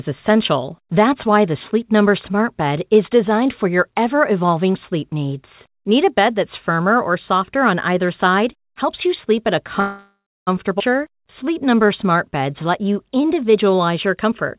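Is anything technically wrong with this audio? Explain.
Yes. The sound is narrowband, with nothing above 4 kHz, as expected of a telephone-style codec such as G.711 on a call path, and three timing faults are audible.

From 9.8 to 10.5 s, just after "you sleep at a", there is a call audio freeze. The last sound is stretched into a fading buzz for roughly 0.4 s and then about 0.27 s of silence, about 0.67 s in all. The likely cause is late packets draining the jitter buffer, so the receiver concealed the wait until the audio resumed. Because playback picks up where it stopped, nothing is lost, which distinguishes it from a skip: time is inserted rather than removed.

At about 10.79 to 10.83 s, still right after "you sleep at a", comes a skip ahead. Roughly 0.4 s of audio is gone, and the two sides are joined by only a 9 ms bridge. This happens when a stretch is dropped while later audio is already queued, for instance when the buffer sheds the backlog built up by the freeze. 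Unlike the freeze, there is no buzz or pause here, only an abrupt jump forward with material missing.

From 11.08 to 14.07 s there is a jitter buffer slow-down. Playback runs at about 93% speed and adds 224 ms over those three seconds, as the receiver repeats single pitch periods and small pieces of pauses to rebuild its reserve. Sounds come out drawn-out, but the pitch stays the same. That sets it apart from a sample-rate error, which would lower the pitch as well, and from a freeze, which stops the audio outright.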